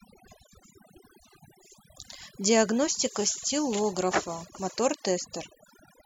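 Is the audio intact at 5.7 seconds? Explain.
No. At 5.7 seconds the speech still carries the overdone noise removal that runs through the whole clip. A noise reducer set far too hard is pushing individual frequency bands down to nothing wherever they sit close to its noise estimate, taking the softer parts of the voice along with them. The background drops to near silence flecked with twinkling specks. A spectrogram shows isolated bright dots scattered over an empty floor and ragged, holed harmonics.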